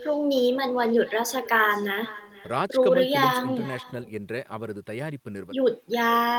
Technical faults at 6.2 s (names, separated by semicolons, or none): echo with no canceller